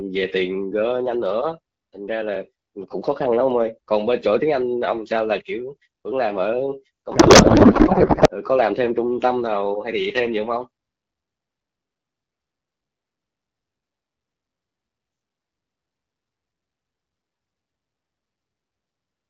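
From 7.11 to 8.29 s a codec payload misread turns the speech into garbled, warbling noise, likely because the AMR bit packing was misinterpreted. Unlike packet loss, the sound never drops out.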